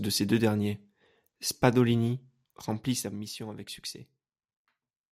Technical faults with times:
2.62-3.33 zipper noise

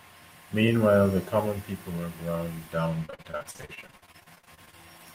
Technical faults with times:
3.05-4.74 repeated packet loss (robotic sound)

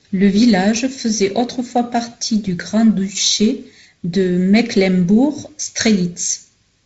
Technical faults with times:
none

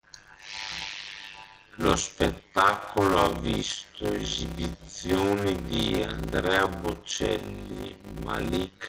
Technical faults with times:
0.00-8.88 block size mismatch (padded)

